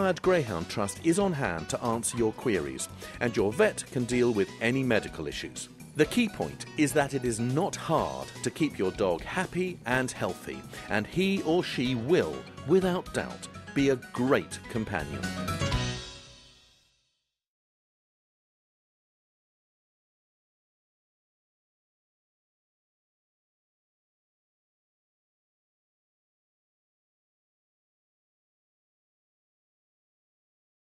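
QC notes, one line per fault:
Nothing stood out on listening, so there is nothing to log for this clip.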